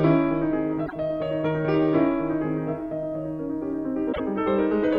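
At 0.85 and 4.12 s the sound skips ahead with a brief glitch, about three 26 ms frames long, likely a broken MP3 bit reservoir after dropped frames.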